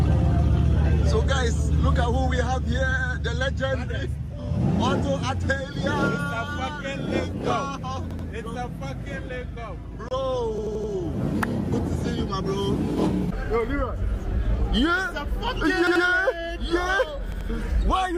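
At 8.11 to 8.28 s, new audio failed to reach the output in time, so the device replayed its last buffer twice more: a repeated buffer. An 85 ms fragment sounds three times with hard joins, a short stutter. The length fits a 4096-sample buffer. At 10.09 to 10.11 s, two separately encoded pieces were joined without trimming the encoder's start delay and end padding, leaving a gap at a join of encoded pieces. A 26 ms gap cuts in with smeared edges, then the sound resumes where it stopped. The repeated buffer returns at 10.58 to 10.92 s, with the fragment played four extra times for a longer stutter, and again at 15.87 to 16.04 s and 17.32 to 17.49 s, each with two extra plays.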